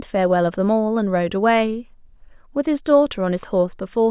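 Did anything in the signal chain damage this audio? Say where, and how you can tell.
No, nothing in the chain seems to have harmed this speech; I can't hear anything that points to a problem at any stage.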